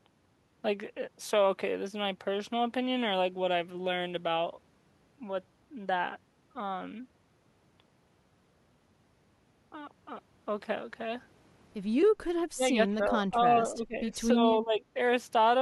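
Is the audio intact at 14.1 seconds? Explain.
No, it's inside a stretch of speech suppressed in double talk from 12.55 to 14.15 s. The speech dips by roughly 15 dB, likely because an echo canceller ducked it while the far side talked. The waveform envelope visibly shrinks, and the spectrogram fades.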